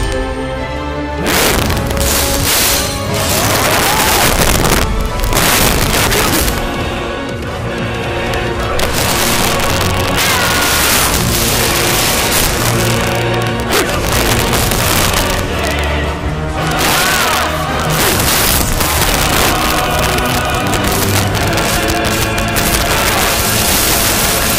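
From start to finish the clip suffers integer overflow: the signal was pushed about 8 dB past the integer ceiling, and instead of being limited, each peak that crossed it wrapped around to the opposite extreme. Only a few percent of samples go over, so the damage lands on loud moments as violent, splintering cracks far harsher than clipping. A waveform shows peaks snapping across to the other polarity; a spectrogram shows bright broadband vertical streaks.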